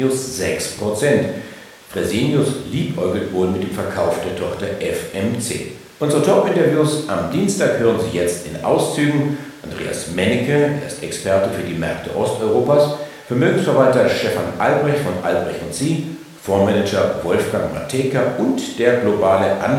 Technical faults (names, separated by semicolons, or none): none